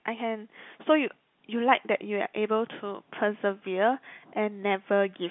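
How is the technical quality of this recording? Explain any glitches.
Nothing here sounds like a glitch: it's telephone-band speech, limited to roughly 150 Hz to 3.5 kHz as you'd expect from 64 kbps G.711 coding, and no dropouts, clicks or other faults come through.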